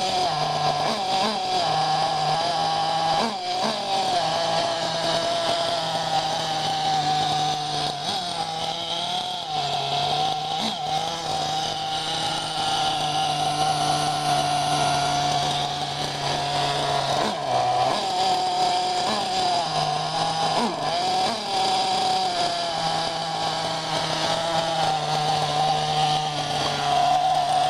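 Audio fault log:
No faults are evident at any point in the recording.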